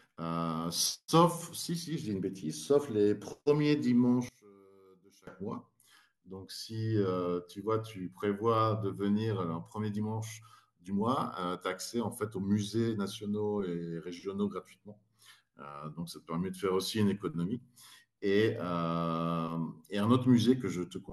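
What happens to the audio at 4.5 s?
One channel was likely inverted from 4.29 to 5.27 s, so summing to mono cancels the centred speech, which drops about 26 dB to a faint trace.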